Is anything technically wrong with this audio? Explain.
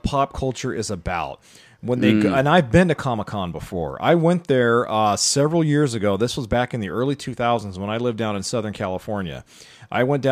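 No, nothing technically wrong turns up anywhere in this speech recording, so there's nothing here to flag.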